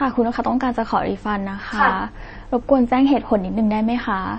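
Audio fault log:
Throughout: MP3-style compression. Nothing is heard above about 8.3 kHz, and the speech has a watery, swirling quality as weak frequency detail drops in and out from one frame to the next. S sounds turn metallic and chirpy, and consonant onsets smear. This is plainly audible and points to a starved bitrate around 32 kbps, likely from MP3 encoding. A plain low-pass filter would dull the top without this shifting, bubbling texture.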